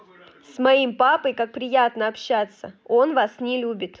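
No technical faults can be heard in the speech, which carries the normal mark of call microphone processing: the lowest bass is trimmed by its high-pass filter and nothing sits above 8 kHz.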